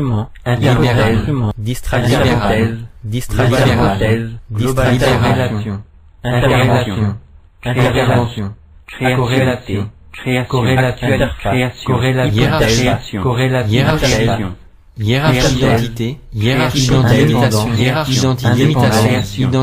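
No technical faults can be heard anywhere in the recording, and the signal stays steady and intact throughout.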